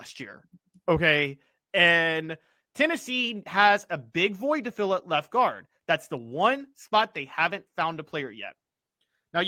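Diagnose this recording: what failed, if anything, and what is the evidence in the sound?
No fault is audible here.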